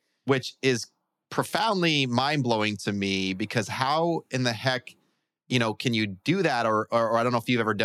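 No audible technical faults.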